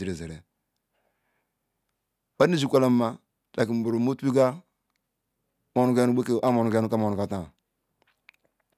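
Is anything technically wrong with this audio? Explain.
No, nothing technically wrong can be heard in this speech recording. No fault turns up at any point in the clip.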